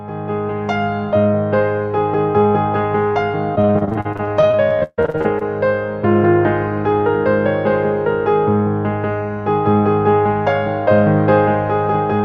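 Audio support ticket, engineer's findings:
Repeated packet loss (robotic sound), 3.55–5.43 s: choppy stretch with pieces missing, 23 gaps patched by stretching the last sound, about a third concealed. Network jitter or loss on the transport path.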